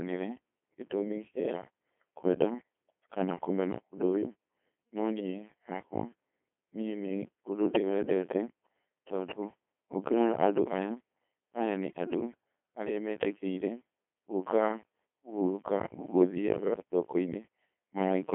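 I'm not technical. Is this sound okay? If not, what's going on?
No. Throughout the clip, the speech has been squeezed through a Codec 2 vocoder, a very low-data system built for digital radio. It doesn't send the actual voice. It sends a rough summary of pitch, loudness and tone, and the receiving end rebuilds a voice from simple tones. The result sounds robotic and buzzy, heavily damaged, and thin like a phone line, with nothing above about 3.7 kHz.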